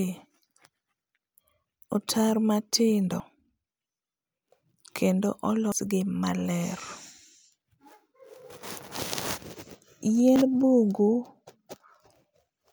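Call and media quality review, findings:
Abrupt forward jumps in the speech at 3.2 s (after "otaro matindo"), 5.72, 9.2 and 10.36 s, each skipping roughly 40 to 100 ms. Likely dropped buffer (overrun): capture samples overwritten before being read.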